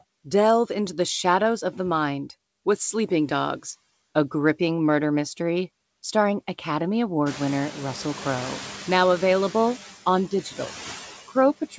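Noise suppressor artifacts run through the whole clip: the background is pulled down by about 11 dB between phrases and comes back under the speech. The room noise rises around 7.5 s. At 10.31 to 10.73 s, the noise suppressor cuts speech: about a tenth of a second of soft sound drops by up to about 10 dB and sounds swallowed. Unlike the residue, this loss falls on the speech itself, not the background. The same cut returns from 11.61 s to the end, up to about 13 dB deep, over roughly a tenth of a second, so the final sounds fade into the background instead of simply ending.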